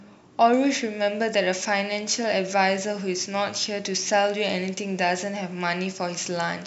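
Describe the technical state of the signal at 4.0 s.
Pre-emphasis left on, from 0.53 s to the end at 6.67 s, covers 4.0 s. The speech keeps a 75 µs FM-style treble boost with no matching de-emphasis, leaving 10 kHz about 14 dB above 1 kHz and the sound thin, bright and sibilant.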